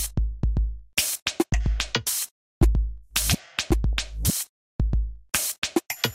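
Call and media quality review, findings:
DAB burbling at 3.93 s. A brief few watery blips over the sound. Probable component: DAB receiver or MP2 decoder. Weak reception lets a low bit-error rate, well under a tenth of a percent, slip past error correction. Corrupted samples put short noise blips in single sub-bands.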